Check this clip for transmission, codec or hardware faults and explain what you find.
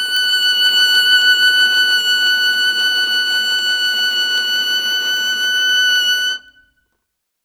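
The music carries word clock ticks from 0.17 to 7.27 s: about 30 short, sharp ticks of uneven strength, roughly every 0.3 s. A receiving clock running roughly 100 ppm off the sender's drops or repeats a single sample at each slip. The steady spacing separates this from random clicks or dropouts.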